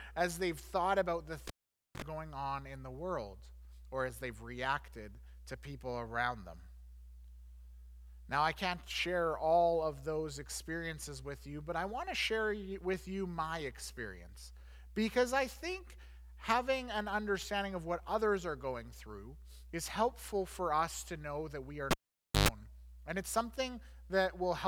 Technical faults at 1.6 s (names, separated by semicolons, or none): cable pulled and plugged in